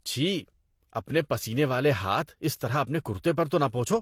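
Throughout the speech, the sound carries two layers of compression damage at once. It is likely the result of transcoding between lossy codecs: one encoder's output re-encoded by another, which fits a Vorbis stream at around 51 kbit/s followed by HE-AAC at around 48 kbit/s. The second codec wastes bits reproducing the first one's smearing and adds its own swirly, metallic texture. On a spectrogram, energy stops flat at 17.2 kHz, and speckled, blocky artefacts show in the upper bands.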